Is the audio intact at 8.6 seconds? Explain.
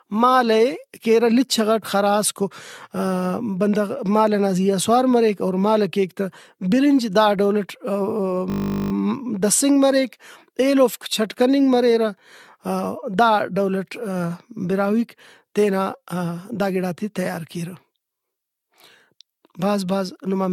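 No. From 8.5 to 8.92 s the speech turns into a steady 50 Hz buzz, ending just before "دسنگ مریک ایلوفک". This is a system hang loop: the system froze while the sound hardware replayed one 20 ms buffer 21 times over.

The sound at that moment is also swirly, smeared and hollow, with blurred attacks and nothing above 17 kHz. This is likely generation loss from about seven rounds of AAC-LC re-encoding, consistent with 96 kbit/s. Each pass adds fresh quantisation noise and spectral holes.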